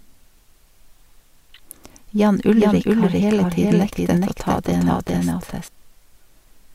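From 2.26 s to 5.68 s the speech is heard twice at once, with a second full-band copy trailing the first by roughly 400 ms at about the same level. It carries no reverb tail or room colour, and it switches in and out abruptly at both ends. This is a doubled audio track, likely from the same signal reaching the mix through a second, slower path, so two identical copies play out of step.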